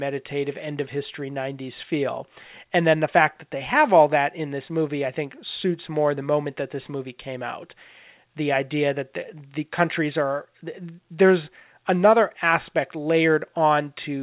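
No technical faults can be heard in this recording.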